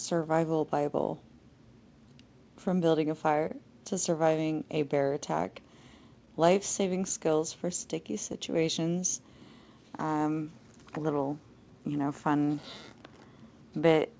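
The whole clip carries clock drift between sender and receiver. The far end's clock runs slow, by something like one and a half percent, so the receiver's jitter buffer keeps drifting toward empty and has to be topped up. You hear it as an unsteady, slightly dragging pace.

From 0.70 to 2.75 s come the first repeated timing corrections. The receiver plays things at 99% speed, stretching in small uneven steps and adding a few tens of milliseconds overall. It comes across as faint hiccups, with the sound easing back a touch.

At 3.48 to 3.51 s there's a short stall from a late packet. The buffer ran dry, so the receiver held the last sound for 21 ms until the packet turned up. Nothing is lost, but that instant hangs a little, with a slight buzz or dip.

From 4.82 to 13.81 s the repeated timing corrections return, again at 99% speed. They stretch the audio by around a tenth of a second across that stretch. 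There are more of those small, irregular lurches, all pulling the same way, sitting on a band-limited call sound with nothing above 8 kHz.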